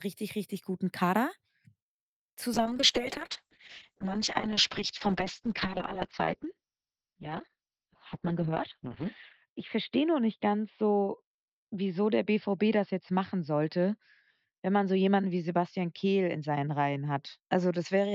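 At 2.55 s a call bitrate drop cuts the encoder from 64 to 6 kbps, holding its lowest for 5.79 s and lasting to the end. Speech turns coarse and watery, and bandwidth shrinks from 20 kHz to 6 kHz, leaving a flat spectrogram ceiling at 6 kHz.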